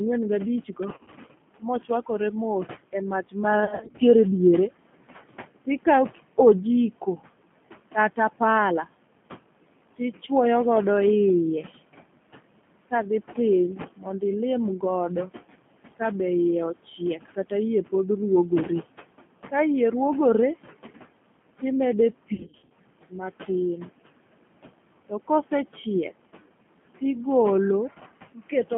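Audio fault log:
Throughout: noise suppressor artifacts. The background noise is pulled down by about 18 dB between phrases and swells back under speech. The suppressor gates bands frame by frame.
Throughout: G.729 codec. Speech is squeezed into a telephone band of 150 Hz to 3.4 kHz. It sounds rough and slightly synthetic. The codec rebuilds each 10 ms frame from a vocal tract filter, a pitch predictor and a few pulses, at 8 kbit/s.
0.94–1.15 s, 3.60–4.01 s, 22.34–22.72 s: VoIP packet loss concealed by the speech codec. Lost packets are scattered through each span, with gaps up to 40, 50 and 60 ms. The decoder extends the last pitch and filter, so the sound turns into a buzzy tone or coloured noise that fades. It stays weak briefly afterwards.
4.85–5.68 s, 13.96–14.22 s, 28.34–28.52 s: speech cut by the noise suppressor. The suppressor mistakes quiet speech for noise and dips it by up to about 19, 16 and 13 dB. 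Parts sound swallowed, about 300 ms in the first span, and just before "ilim god" in the second.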